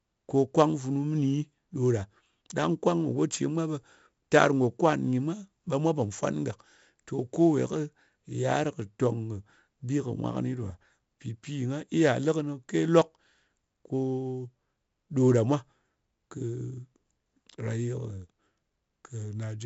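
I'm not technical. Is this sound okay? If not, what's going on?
No. The speech was saved with 4-bit ADPCM compression, an old space-saving method that stores each tiny slice of sound as a rough guess plus a small correction. Because the corrections are so coarse, a gritty hiss rides along with the voice for the whole clip, louder wherever the speech is louder, and sharp sounds come out harsh. Nothing above about 7.7 kHz survives, so the voice also sounds muffled and dull.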